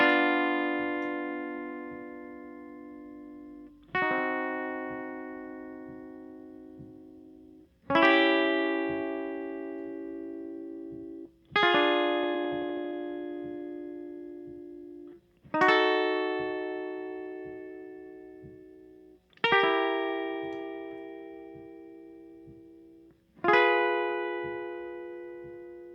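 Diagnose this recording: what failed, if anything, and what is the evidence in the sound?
At 11.25 s the music skips ahead: roughly 0.4 s is missing and the two sides join with no silence, a jitter-buffer or network fault where queued audio was discarded. The waveform and spectrogram show an abrupt seam where the material changes without a gap.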